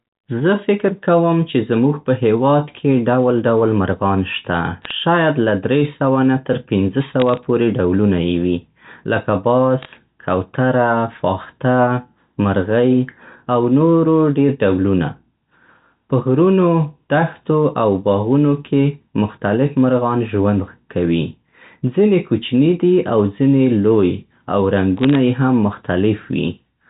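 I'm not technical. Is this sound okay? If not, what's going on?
No. There are short bursts of crackle from bit errors on a digital phone line, around 4.82 to 4.91 s, 7.2 to 7.44 s, 9.83 to 9.9 s and 24.97 to 25.15 s. A small fraction of the digital data got flipped in transit, and each flipped piece changes one tiny slice of sound; a hit on an important piece makes a sharp tick. Unlike a dropout, the speech never cuts out or goes silent. The ticks sit on top of speech that carries on unbroken.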